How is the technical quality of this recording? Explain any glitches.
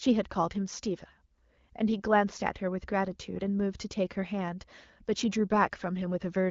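No glitches are audible in this speech recording, which comes through an AMR wideband (HD Voice) channel at 12.65 kbit/s, a rate at which that codec leaves only light coding damage.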